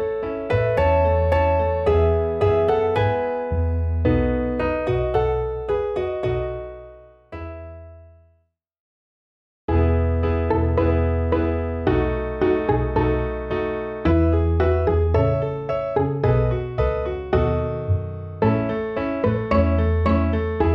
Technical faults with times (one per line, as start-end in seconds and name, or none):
none